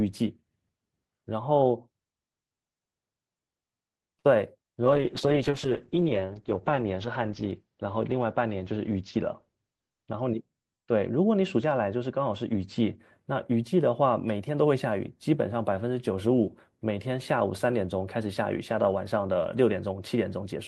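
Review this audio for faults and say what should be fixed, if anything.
At 4.19 to 4.26 s there's a short stall from a late packet. A packet didn't turn up on time, so the jitter buffer ran dry and the receiver held the last bit of sound for about 51 ms until the packet arrived. Then it picked up right where it left off, so nothing is actually lost, just a sound dragged out with a slight buzzy smear. A bit more jitter-buffer headroom or steadier network routing would stop it.

From 4.86 to 13.04 s there's a call bitrate drop. The sound goes rough and muffled, which points to the encoder being pushed from around 32 kbps down to 8 kbps. It sits at its worst for about 2 s before recovering. At that rate Opus codes much more coarsely, and the top end is cut off at 8 kHz, where it was reaching up to 20 kHz before. Better bandwidth estimation, or a sensible minimum bitrate floor, would keep it from sinking that far.

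Inside that stretch, from 9.16 to 9.66 s, there's a jitter buffer speed-up. The buffer had more audio queued than its target, so the receiver snipped out tiny pitch-period chunks, roughly 50 ms in total. Playback runs at about 107% speed with the pitch unchanged, which gives that half-second a slightly hurried feel. Smoother packet delivery, or gentler buffer-drain settings, would keep that rush out.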